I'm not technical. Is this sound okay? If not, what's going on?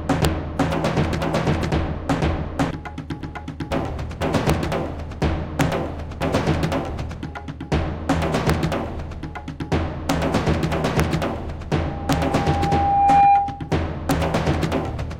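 No. There are sharp, violent cracks at 0.25, 4.50, 5.61, 8.50, 10.10, 11.00, 12.13 and 14.11 seconds, harsher than ordinary distortion. This is integer overflow: the loudest moments exceeded the largest number the system could store, and instead of stopping at the limit they wrapped to the opposite extreme.

From 11.75 to 13.73 seconds a steady whistle near 801 Hz swells over about a second and a half and ends up louder than the sound itself. This is loudspeaker feedback squeal: a microphone picked up its own loudspeaker, and that one pitch kept feeding back on itself and growing.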